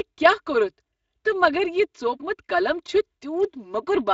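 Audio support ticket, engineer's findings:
Channel delay (comb filtering), throughout. Hollow, phasey tone; one channel around 3 ms late, summed to mono, cancelling evenly spaced notches from roughly 150 Hz upward.

Speex codec damage, throughout, plainly audible. Hoarse, noisy speech; starved CELP excitation, fitting a mid-rate Speex setting near 20 kbps.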